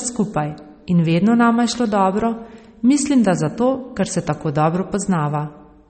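Throughout the speech, nothing is present above 8.4 kHz, and the remaining band has a watery, swirling quality, with sibilants breaking into metallic chirps and consonant onsets smeared. This is plainly audible damage, likely from MP3 compression at a low bitrate in the region of 32 kbps. Short of bits, the encoder has cut the treble at a fixed point and discarded weaker spectral lines, which flicker in and out between frames.

From 1.15 s to 3.80 s, just after "skupaj in", a switching supply whistle appears. It is a thin, high tone wandering between about 9.2 and 9.5 kHz, roughly 40 dB below the speech. A switch-mode power supply running in an audible burst mode, or beating against another supply, produces this tone, and its pitch shifts as the load on the supply changes.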